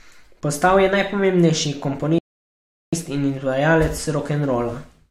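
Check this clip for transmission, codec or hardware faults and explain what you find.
One transmission fault is present in this speech clip. A rebuffering stall runs from 2.18 to 2.93 s, just after "je najpomembnejši". Playback exhausted its downloaded audio and paused until more data arrived, so the sound drops to silence for about 0.74 s, then resumes exactly where it stopped with "in izvajalec". Nothing is skipped; the gap only adds time.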